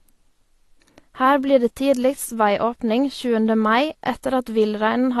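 From start to finish, the speech carries plainly audible codec damage. Nothing reaches above 12 kHz, so the top end sounds dull and closed in. Sibilants turn fizzy and smeared. Sustained vowels warble. The likely cause is AAC compression, in its AAC-LC form. The encoder lacked enough bits for the full spectrum. It lowered the cut-off. The damage points to a low bitrate, around 32 kbps.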